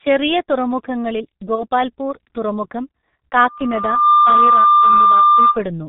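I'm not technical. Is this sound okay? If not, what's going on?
No. The speech sounds muffled and hoarse from start to finish, as if heard through a cheap old phone line, with consonants like s and t smeared and dull. This comes from the G.723.1 codec, an early internet-phone format that squeezes speech hard, keeps nothing above about 4 kHz, and updates its model of the voice only every 30 ms or so. That slow update is why sounds blur into one another.

At 1.55 s, just after "ചെറിയ തുറമുഖങ്ങളിൽ", the voice briefly turns into a buzzy or noisy, stretched smear that fades, and it stays weak or distorted until about 1.66 s. This is VoIP packet loss concealed by the speech codec. A short piece of the signal went missing, which fits a single lost 30 ms chunk, and the decoder filled the gap by repeating and fading the last sound it had. A smaller glitch of the same kind occurs at 5.51 to 5.55 s.

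From 3.47 s a steady, high whistle at about 1.2 kHz appears and swells over roughly the next 0.7 seconds until it is much louder than the speech. It continues until 5.67 s. This is a loudspeaker feedback squeal. A microphone picked up the speaker it was feeding, so that one pitch kept going round the loop, getting louder each time, until it drowned out the voice.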